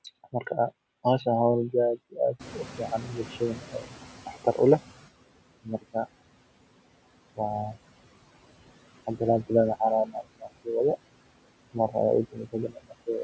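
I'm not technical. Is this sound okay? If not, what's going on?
No, not quite. Around 2.4 seconds the room background gets noticeably louder all at once, and the noise suppressor is caught off guard. For the next few seconds, until about 5.1 s, the noise comes through with less reduction before the suppressor catches up and pushes it back down.

There are also two places where the speech is cut by the noise suppressor: from 5.64 to 6.07 s, and from 12.32 to 13.08 s. In each, the suppressor briefly mistakes a bit of speech for background and turns it down, so a short piece sounds swallowed or faint.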